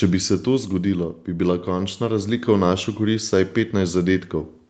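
From 0.05 s to 1.31 s, automatic gain falling pulls the level down by about 7 dB. The gain control judged the input too loud and eased its gain back over just over a second. The speech starts out loud, then sinks steadily. The background sinks with it, which shows the change comes from the gain stage and not from the talker. Nothing abrupt happens; it is a smooth fade downward.

From 1.25 s to 2.76 s, automatic gain rising follows almost at once and lifts the level by about 6 dB. The controller now judged the input too quiet and raised its gain over roughly a second and a half. Speech and background swell together. Coming straight after the fall, the two changes make the level dip and then climb back. The call path band-limits everything above 8 kHz, consistent with Opus at 32 kbps.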